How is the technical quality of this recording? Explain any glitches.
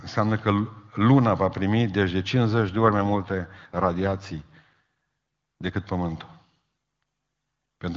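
The recording has one glitch, an AMR rate drop, heard as a stretch of rougher, degraded speech. From 2.57 to 5.71 s, just after "va primi deci de", the link evidently forced the AMR wideband codec to a lower rate, with the sound fitting a drop from 23.85 to about 8.85 kbit/s so that more bits went to error protection. The voice turns raspy and synthetic with no gap or loss of bandwidth, then clears when the rate recovers.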